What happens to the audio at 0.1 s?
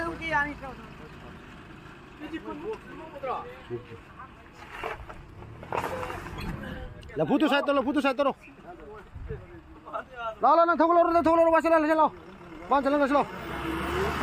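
Nothing goes wrong at 0.1 s: the audio plays through that moment intact, with no fault to be heard.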